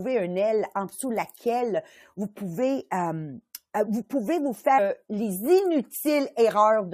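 Speech clip with an abrupt jump just after "euh vous pouvez vous" at 4.77–4.79 s, likely a stream segment skipped: the waveform shows a hard discontinuity and the spectrogram a sudden vertical break.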